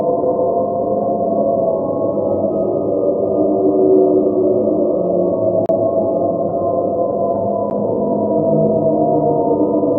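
At 5.66 s a 30 ms block of digital silence leaves a short hole, and a 10 ms block at 7.70 s is heard as a tick. In each case the output went to zero, either because a buffer went unfilled or a calculation produced invalid values.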